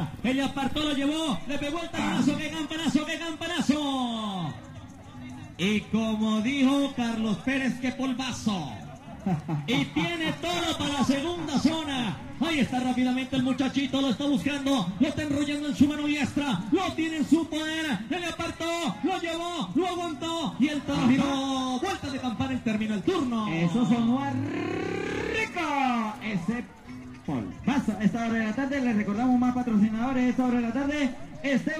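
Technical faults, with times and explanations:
No technical faults can be heard anywhere in this recording.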